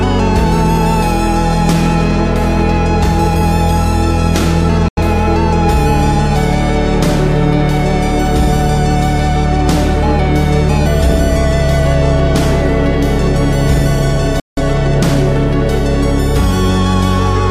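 At 4.88 s the sound snaps to silence for a beat and comes back at 5.01 s. That's a digital broadcast dropout: the receiver lost good frames and muted until clean ones arrived. About 85 ms went missing, which fits two frames. There's only a roughly 3 ms fade, so it's a hard cut. A longer hole opens at 14.40 s and lasts to 14.60 s, about 171 ms gone, consistent with four frames. Whatever was sent in those gaps is simply lost.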